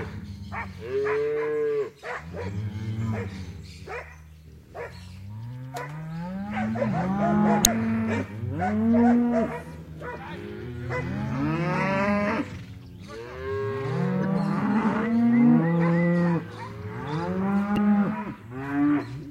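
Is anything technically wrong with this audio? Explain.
Yes. There's damaged data in the compressed stream at 7.62–7.67, 14.23–14.25 and 17.74–17.79 s. Corrupt bytes there throw the decoder off, so it misreads frames and hunts for the next header, and each spot comes out as a brief glitch.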